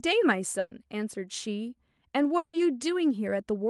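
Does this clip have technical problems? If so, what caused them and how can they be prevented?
Yes. There's a burst of packet loss from 0.59 to 0.73 s. The receiver stretched the last bit of sound across the roughly 120 ms gap, fading it out, and then picked up later, so that stretch of speech is simply gone. Turning on Opus in-band FEC or adding some redundancy would help the receiver recover those packets.

From 2.37 to 2.55 s, about 160 ms of speech is replaced by a fading continuation of the previous sound, and the speech resumes past the missing part without any dead silence. The likely cause is a long network dropout. A more stable connection, such as wired rather than flaky Wi-Fi, is the best prevention.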